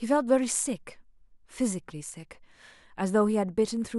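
Speech recording with no audible technical faults anywhere in the clip.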